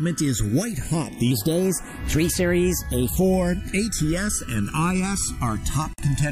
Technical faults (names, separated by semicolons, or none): channels drifting apart; section at the wrong speed